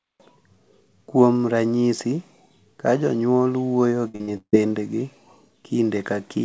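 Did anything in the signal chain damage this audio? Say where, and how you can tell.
Yes, at the network stage. From 4.08 to 4.55 s there's repeated packet loss, giving a choppy, robotic stretch with four dropouts, the longest 152 ms. The jitter buffer papers over each hole by stretching the last sound, so about two-thirds of that span is concealment. The G.722 call path has nothing above 8 kHz throughout.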